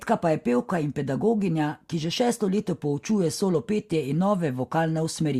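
A speech recording, with nothing technically wrong with it.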